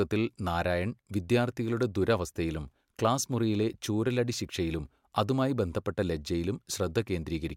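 A speech recording with no audible technical faults.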